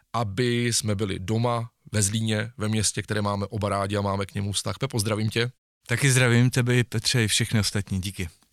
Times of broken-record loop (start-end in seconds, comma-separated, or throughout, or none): none